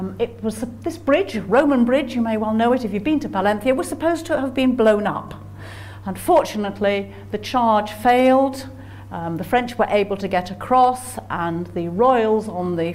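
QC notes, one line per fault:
No technical faults are audible anywhere in the signal.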